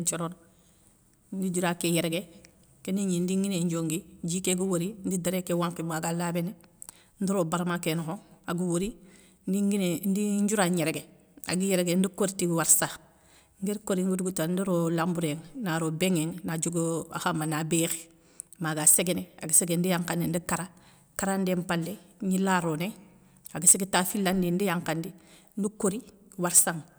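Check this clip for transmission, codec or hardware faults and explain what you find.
Hard clipping occurs four times in the speech. Peaks exceed what a stage can pass and are cut flat. The waveform shows squared-off tops, the spectrogram shows vertical smears of high harmonics, and each instance sounds like a harsh crackle:

18.87 to 18.94 s, just after "ma ga": overdriven by about 5 dB.
19.55 to 19.59 s: a milder overload of about 2 dB.
23.67 to 23.98 s, just before "filandi ndi yakhandi ndi": the longest and strongest, about 7 dB over.
26.56 to 26.61 s: about 6 dB over.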